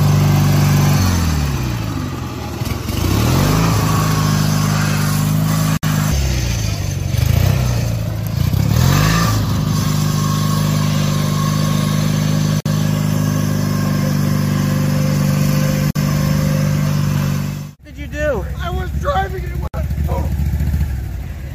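Short silences of about 50 to 65 ms cut into otherwise continuous audio at 5.77, 12.60, 15.91 and 19.67 s, with smeared edges. Each is a gap at a join of encoded pieces, where encoder start delay and end padding were left in. At 7.53 s the waveform briefly flattens while under a millisecond of audio was lost. This is an underrun with a held sample, which fits a 32-sample dropout.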